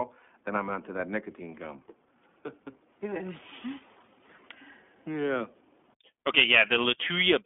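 From start to finish the speech sits behind the iLBC codec: nothing above 3.8 kHz, a thin narrowband line, and a plainly rough, synthetic edge from coding each 20 ms frame on its own.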